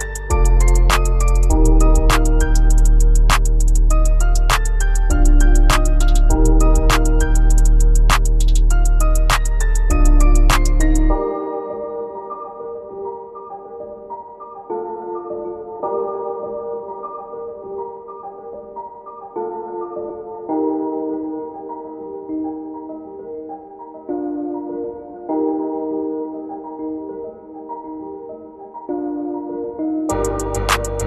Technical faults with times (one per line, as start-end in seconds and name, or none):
15.79 compressed frames skipped
18.53 compressed frames skipped
20.09 compressed frames skipped